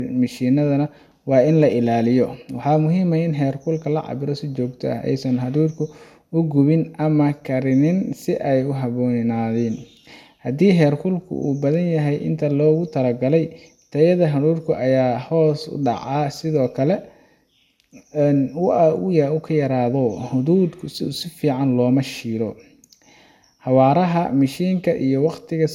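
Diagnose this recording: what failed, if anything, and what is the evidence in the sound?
Throughout the speech, the sound is swirly and hollow, with consonant attacks smeared and nothing above about 17.3 kHz. That fits an MP2 chain at 128 kbit/s, likely generation loss at the codec stage: around seven re-encodes, each quantising on a shifted frame grid, stacking noise and spectral holes.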